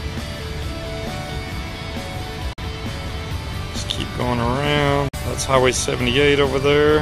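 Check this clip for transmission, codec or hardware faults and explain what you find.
Two brief gaps of silence interrupt the audio. Bluetooth dropout is the likely cause, at 2.53 to 2.59 s and 5.09 to 5.15 s: packets missed their delivery deadline, so the output fell silent and roughly 46 ms of audio was lost each time, about two lost frames' worth. The sound then cuts back in further along, as though it kept playing through the hole.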